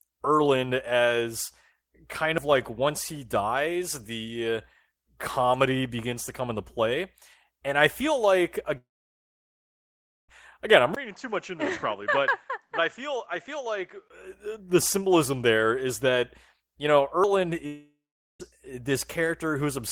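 Audio missing between chunks breaks this speech recording at 2.38, 7.34, 12.28 and 17.24 s. The skips come every 5.0 s, each dropping around 40 ms with the edges butted together. A recorder likely lost a sliver of sound each time it closed one 5-second chunk and opened the next. A long network dropout runs from 8.77 to 10.30 s, about 1.5 s of audio that never arrived. A brief fading fill gives way to silence, and the sound resumes later with that stretch gone, which is likely caused by lost network packets. A shorter dropout from 17.66 to 18.41 s behaves the same way, with about 0.4 s of it silent. An input switched to a poorer device colours 10.95 to 14.10 s. It opens with a 20 ms gap, then the sound turns duller and about 10 dB quieter, with nothing above 7.6 kHz and a new noise floor about 40 dB down. Full tone returns at 14.10 s, which points to the system likely changing to a narrower-band microphone and then back.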